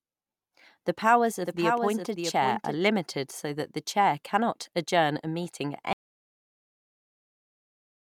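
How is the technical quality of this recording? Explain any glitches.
The recording has two clear faults: a stretch where the speech is doubled, and a cut to dead silence near the end.

From about 1.46 to 2.76 s there's a doubled audio track. A second, full-band copy of the speech runs roughly 0.7 s behind the original and only about 5 dB quieter. It has no reverb tail or room colour, and it drops out abruptly just before "so that the chair". The likely cause is the signal being picked up a second time through a slower route, or an edit leaving two misaligned copies stacked.

At 5.93 s, right after "adjourn a meeting at", there's an audio dropout to silence that lasts to the end of the file. The speech stops mid-flow and is replaced by silence, with no room tone or hiss at all. That points to the input vanishing while the recorder kept writing, most likely from a disconnected device, a broken link or an accidental mute. 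Whatever was said after that point is gone.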